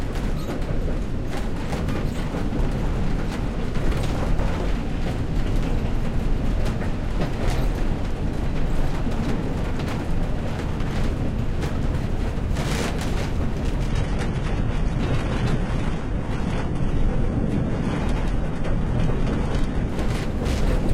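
Adaptive stream at a lower bitrate from 13.89 to 19.89 s: the stream abruptly switched to a leaner encoding, with no gap, as though the connection slowed. Nothing remains above 11.8 kHz and artefacts rise, which points to a drop from a high-rate AAC stream to a low-rate HE-AAC one.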